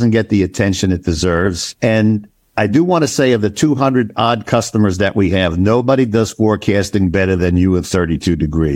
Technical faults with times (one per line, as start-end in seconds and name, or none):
none